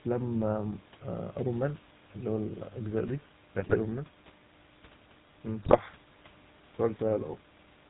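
From start to finish the speech has a buzzy, gravelly roughness and nothing above 4 kHz, the sound of the GSM full-rate codec, which fits 13 kbps. It models the vocal tract and drives it with coarse, regularly spaced pulses, leaving plainly audible damage.

From 3.58 to 3.75 s the speech breaks into squawks, pops and gargling, and it does so again from 5.62 to 5.79 s. These are GSM bit errors. Flipped bits corrupt the filter, pitch and gain values, bending the spectrum and the level across what sounds like a run of several frames each time.

Room noise sits about 23 dB below the speech throughout.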